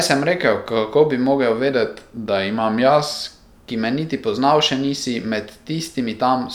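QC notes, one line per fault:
1.71–3.27 s, drift correction step: the speech abruptly slows by about 5.5% and drops about 98 cents, nearly a semitone, then snaps back to normal. Speed and pitch move together, likely from clock-matching software changing the playback rate in one step to rebalance its buffer.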